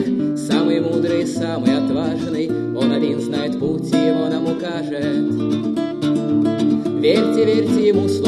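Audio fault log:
Nothing wrong turned up anywhere in the clip, so there's nothing to log.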